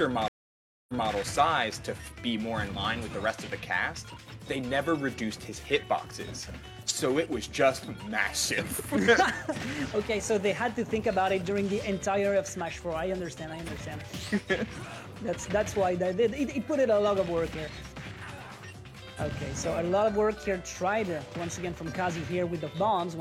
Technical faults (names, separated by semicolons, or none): stream reconnect